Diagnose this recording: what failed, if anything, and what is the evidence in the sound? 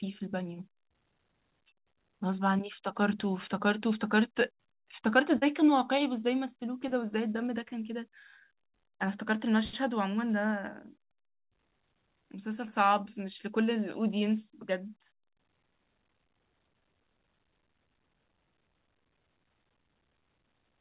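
At the network stage there is a short concealed packet loss between 5.38 and 5.44 s. About 40 ms of audio arrived too late or not at all, and the receiver filled roughly 36 ms of it by extending the preceding sound before blending back into the real signal, which leaves a brief smeared wobble. Unlike a buffer underrun or dropout, there is no silent gap or hard click, only a synthetic continuation. The call audio has nothing above 4 kHz, which fits a narrowband G.711 path.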